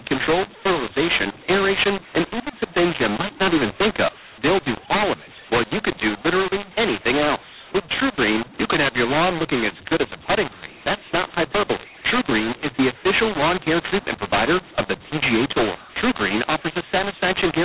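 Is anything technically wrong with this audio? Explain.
Yes. A mu-law and A-law mix-up runs through the whole clip. The speech was coded with A-law but decoded as mu-law. Every level gets scrambled, some too loud, some too soft. Quiet moments rise above silence, so pauses fill with noise. The speech sounds harsh and distorted, within a band that stops near 4 kHz.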